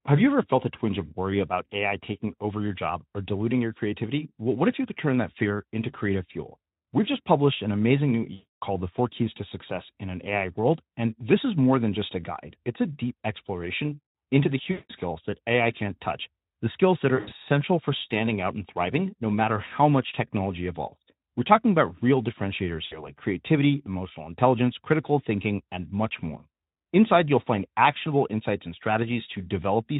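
VoIP packet loss concealed by the speech codec occurs four times. Packets go missing and the Speex decoder, running lightly compressed at 15 kbps, fills each gap by extending its last pitch and filter at falling gain. At 8.33 to 8.63 s, after "published an amazing new", roughly 280 ms of audio is lost. At 14.71 to 14.91 s the gap is about 180 ms. At 17.15 to 17.33 s, between "touch the skills that" and "for standing out and", about 120 ms is lost in scattered dropouts, the longest near 80 ms. At 22.85 to 23.12 s, after "talking about real differentiators" and before "creativity emotional intelligence critical", the loss is about 60 ms. Each gap sounds like a stretched, buzzy tone or a coloured noise that fades, and the sound stays weak or smeared briefly after it returns.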